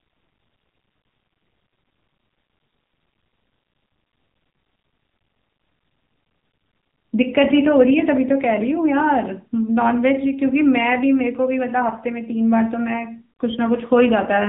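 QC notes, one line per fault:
Throughout: AMR narrowband mobile codec. The speech is band-limited with nothing above about 3.8 kHz, and a plainly audible buzzy, synthetic edge suggests a low bitrate near 7.95 kbps. A spectrogram shows a hard ceiling there.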